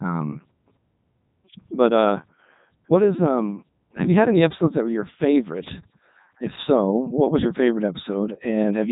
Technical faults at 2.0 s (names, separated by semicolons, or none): Codec 2 vocoder